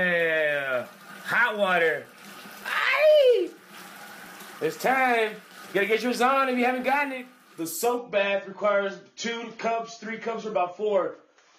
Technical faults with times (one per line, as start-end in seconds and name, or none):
7.98-11.58 adaptive stream at a lower bitrate